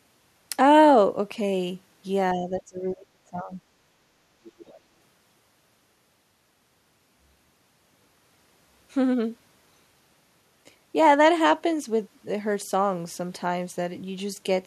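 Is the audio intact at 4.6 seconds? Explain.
No. From 4.44 to 4.76 s, the other side's voice leaks through, very faintly. The likely cause is an echo canceller failing to remove loudspeaker playback.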